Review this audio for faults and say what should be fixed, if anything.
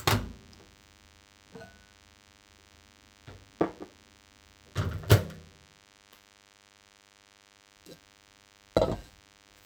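A DECT cordless phone buzz runs under the sound for the whole clip. It is a steady, thin buzz at 100 Hz carrying a dense series of harmonics, sitting well below the main sound, roughly 30 dB down. A nearby DECT handset or base transmits a short radio burst every 10 ms, and some part of the audio circuit rectifies that RF, turning the burst train into an audible 100 Hz pulse. To prevent it, move DECT equipment away from the recording chain and use shielded, balanced cabling with RF filtering on inputs.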